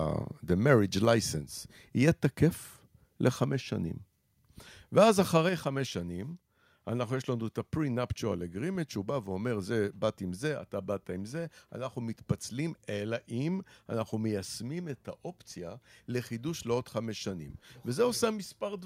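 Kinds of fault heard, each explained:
Microphone volume stepped down: at 1.05 s the whole speech signal, voice and background together, drops by about 3 dB in a single step, then again at 5.49 s by about 4 dB, likely the call software lowering the microphone's input gain after judging it too hot.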